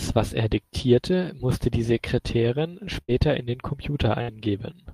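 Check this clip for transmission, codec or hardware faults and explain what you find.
Two bursts of packet loss interrupt the speech, at 3.01 to 3.13 s and at 4.22 to 4.31 s. Each time the sound briefly hangs as a held buzz or fading hiss, then jumps ahead. A run of packets never arrived in time, so the receiver stretched the last audio it had for about 70 ms, then 64 ms, while lowering its level. Playback then resumed later in the stream, leaving about 60 ms of speech missing in each gap.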